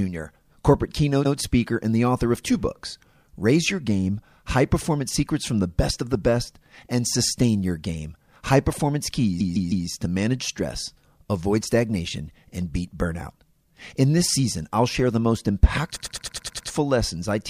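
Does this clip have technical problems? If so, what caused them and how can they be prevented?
Yes, there are repeated frames: short runs of coded audio get played again, so the speech stutters. Near 1.24 s, just before "speaker and the author", a 0.10 s chunk plays twice. From 9.39 to 9.86 s a 0.16 s chunk repeats three extra times. From 15.95 to 16.68 s, after "I'll share the most", a 0.10 s chunk loops seven extra times. Fix the writing or streaming code so retries never resend or rewrite frames already delivered.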